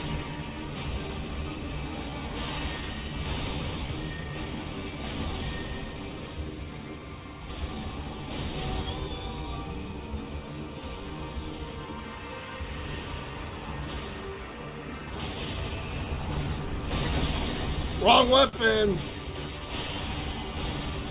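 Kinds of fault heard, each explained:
Clock drift between sender and receiver: The sending device's audio clock runs roughly 3 percent slower than the receiver's, so samples arrive a little too slowly and the receiver's jitter buffer keeps drifting toward empty. The receiver has to keep compensating, and across the whole clip the sound carries small, unevenly spaced timing hiccups and a faintly unsteady pace rather than one clean flow.
Repeated timing corrections: To make up for the slow sender, the receiver repeatedly stretches short pieces of audio, always in the same direction, from 0.03 s to 20.92 s. The result plays at about 97 percent speed, and the stretches add up to roughly half a second of extra material. Each edit is tiny, so it shows only as slight stumbles or a tempo that does not quite hold steady.
Short stall from a late packet: At 18.49 s a packet arrived after it was due and the buffer briefly ran dry. 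The receiver held the last sound for 41 ms until the packet turned up, then carried on from the same point, so nothing is skipped. What can be heard is a brief frozen or slightly buzzy sustain, and everything after it sits 41 ms later.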